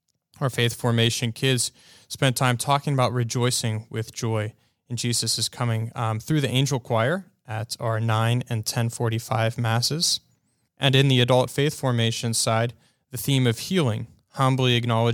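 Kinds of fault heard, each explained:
No faults can be heard.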